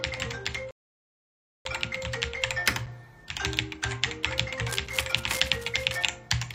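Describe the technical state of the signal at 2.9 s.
Right around 2.86 s there's a gap between chunks, a hard-edged hole of about 6.5 ms. The audio seems to arrive in 2-second blocks, and a sliver of silence was left at this join, so nothing's missing but the sound briefly drops out.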